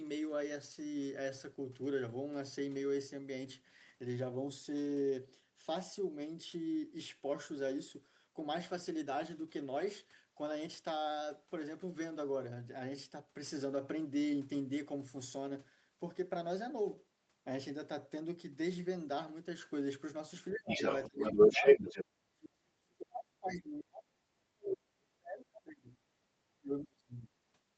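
A speech recording in which, from 20.51 to 22.05 s, the other side's voice leaks through, roughly 15 dB above the talker; unlike ordinary crosstalk, this second voice is likely loudspeaker echo that the canceller left in the microphone signal. Speech is also suppressed in double talk, with dips of about 20 dB at 20.52–20.8 s and 21.07–21.64 s, a much deeper cut of about 40 dB across 22.17–25.89 s, and about 35 dB at 26.59–27.28 s. Here the talker's own voice sinks or vanishes, likely while the other side speaks, rather than dropping out on its own as a network gap would.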